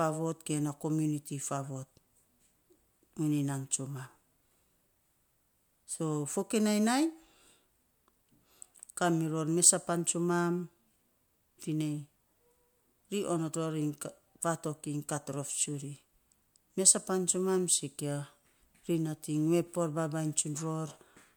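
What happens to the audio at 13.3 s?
Nothing goes wrong at 13.3 s: the speech carries on intact through that moment, with no break, distortion or other fault to be heard.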